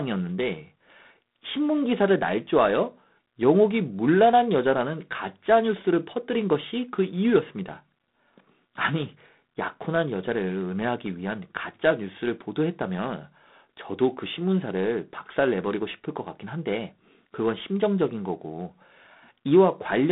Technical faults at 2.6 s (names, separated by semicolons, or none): G.726 ADPCM